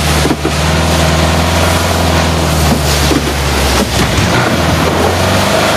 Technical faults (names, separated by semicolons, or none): gain pumping